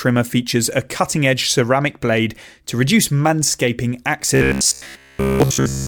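A speech clip that, from 4.35 s to 5.87 s, right after "blade to reduce manscaping", turns into a rigid, metallic buzz pitched at 66.7 Hz that only loosely tracks the talking. This is robotic sound from repeated short buffers, likely a 15 ms chunk replayed while most of the real audio is skipped.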